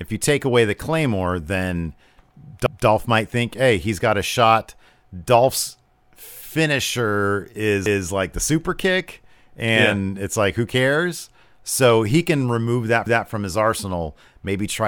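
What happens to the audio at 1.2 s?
Nothing goes wrong at 1.2 s; the audio carries on intact through that moment.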